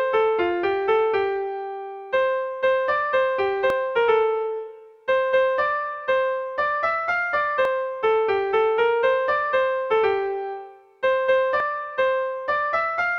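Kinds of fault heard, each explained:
Audio missing between chunks: at 3.70, 7.65 and 11.60 s a short piece, around 50 ms, vanishes and the edges butt together, likely at handovers between 4-second processing chunks. Unlike a dropout, no silence is heard, and the skips recur evenly.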